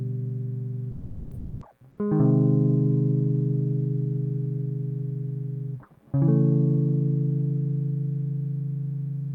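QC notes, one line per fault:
0.91–1.61 s, sound dropped by the voice detector: the music cuts out for about 700 ms and is replaced by steady noise or near silence before it returns at 1.61 s. This is likely the sender's voice activity detection treating the music as background and halting transmission, with the receiver filling the gap with comfort noise. The behaviour points to discontinuous transmission in an Opus-style codec. None of the music in that span reaches the listener.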